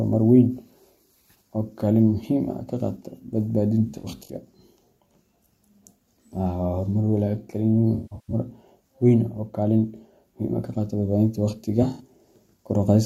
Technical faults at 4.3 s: AAC frame loss with concealment

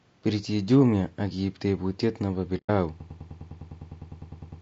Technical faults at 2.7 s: low-delay AAC compression; AAC frame loss with muting

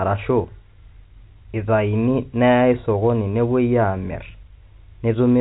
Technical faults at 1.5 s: none

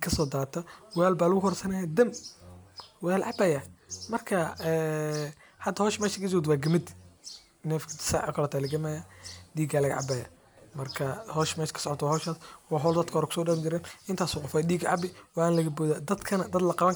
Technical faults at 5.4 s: none

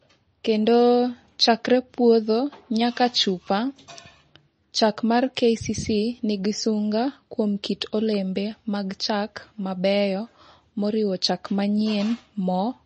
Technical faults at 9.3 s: MP3 compression

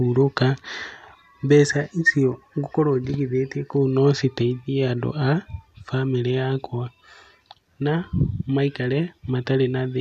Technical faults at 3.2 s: none

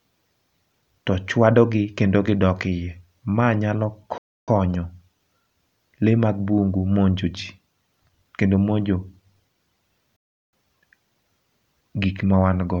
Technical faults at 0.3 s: none

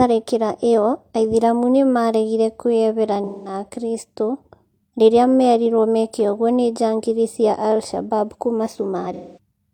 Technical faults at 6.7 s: none

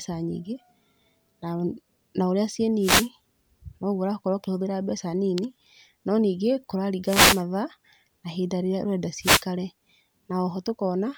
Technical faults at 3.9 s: none

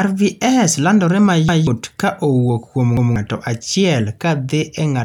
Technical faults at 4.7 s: none

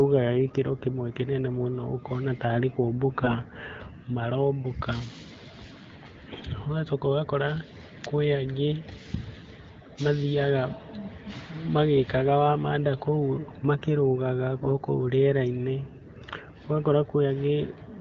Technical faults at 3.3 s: AMR bit errors

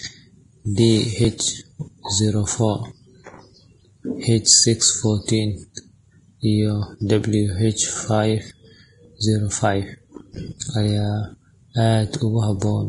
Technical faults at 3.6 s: Vorbis compression

